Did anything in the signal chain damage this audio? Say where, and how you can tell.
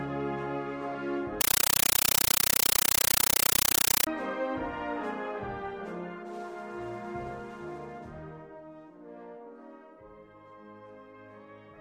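Yes. Between 1.41 and 4.07 s, a compressed stream was played as audio at the playback link. An AC-3 (Dolby Digital) bitstream, which fits a 448 kbps encode, reached the output undecoded and was treated as ordinary samples. The sound is replaced by very loud, chattering static: each packed frame comes out as a burst of noise about 9.3 ms long followed by silence, repeating 31.25 times per second.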